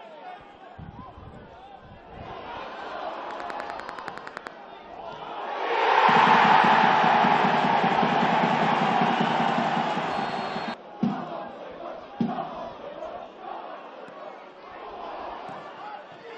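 A train of clicks runs from 3.31 to 4.48 s: around fifteen evenly spaced ticks at about 10.3 per second, sticking out roughly 10 dB above the audio. The regular pulse points to interference from nearby gear or a faulty connection or power supply as the likely culprit.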